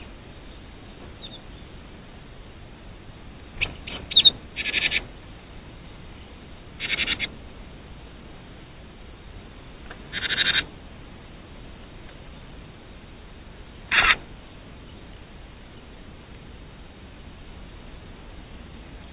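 No faults found; the call path is band-limited with nothing above 4 kHz, which fits a narrowband G.711 mu-law link.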